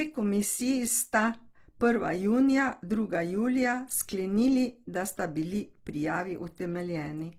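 Throughout, the speech sounds rough, grainy and noisy. The likely cause is Opus compression in music mode filling bit-starved bands with noise, which fits a bitrate near 16 kbps.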